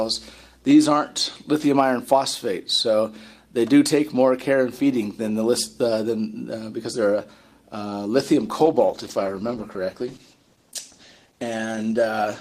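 From 8.46 s to the end, the audio turns rough and muffled, a call bitrate drop that suggests the encoder rate falling from about 48 to 13 kbps, which strips the highs. Unlike packet loss, there are no gaps or glitches, just a steady loss of quality.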